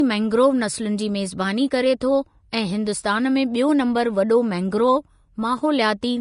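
Throughout, the speech sounds dull, with nothing above 10.6 kHz. This is likely low-bitrate audio saved at a high bitrate, as MP3, which cannot restore what the earlier encoding removed.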